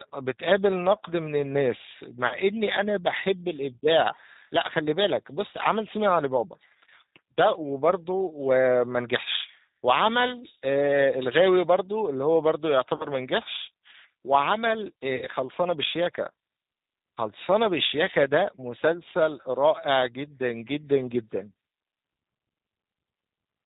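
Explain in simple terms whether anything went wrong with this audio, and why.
G.729 codec, throughout the whole recording: this phone-call codec rebuilds the voice from a simple model of the throat plus a few pulses every few milliseconds, and it discards everything above 4 kHz. The speech stays understandable but sounds muffled, slightly rough and artificial.

VoIP packet loss concealed by the speech codec, at about 2.27 to 2.36 s, 12.96 to 13.07 s and 15.16 to 15.27 s: small chunks of the call, 40, 40 and 60 ms long, never arrived. The decoder filled each gap by stretching the last sound into a fading buzz or noise, and the voice stays weak or distorted just afterwards.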